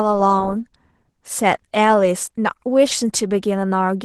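From start to finish the speech carries Opus voice compression damage, plainly audible: a hoarse, faintly robotic quality in the lower band with thin, smeared upper detail. That split points to hybrid coding near 16 kbps. Unlike MP3-style swirling, the roughness sits in the voice's excitation itself.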